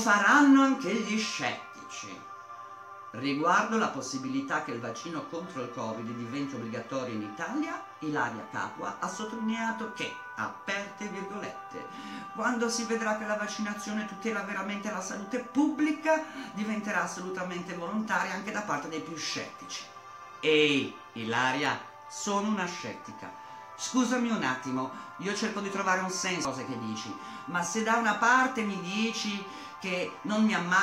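At 26.45 s a brief glitch cuts into the sound. This is damaged data in a compressed stream: corrupted bytes leave the decoder unable to read the frame there, so it loses sync and hunts for the next valid frame header.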